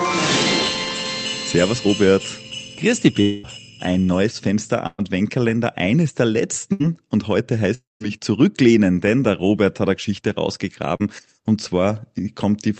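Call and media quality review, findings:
Long network dropout, 3.21–3.47 s: 220 ms of audio missing, filled entirely by a fading continuation of the last sound, no silence, about 15 ms of extra length. Likely network outage upstream of the jitter buffer. Longer than a burst and the fill thins towards noise.

Long network dropout, 7.74–8.02 s: 260 ms missing; continuation fades out, leaving about 170 ms of silence before audio returns further on. The silent tail separates this from burst loss.

Burst of packet loss, 4.87–5.00 s: 120 ms missing, concealment holds the last sound as a decaying buzz or hiss, ending in a brief 20 ms of silence before resuming. Packets lost or late at the jitter buffer; too short to decay fully like a dropout.

Burst of packet loss, 6.72–6.83 s: 80 ms missing, 74 ms of decaying fill, timeline stretched by 7 ms. Same mechanism, shorter run of packets.

Short concealed packet loss, 10.96–11.03 s: 40 ms missing, decoder concealment continues pitch or shaped noise, then blends back, adding about 10 ms. 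Heard as a brief smear or wobble, not a held buzz, which distinguishes it from burst loss.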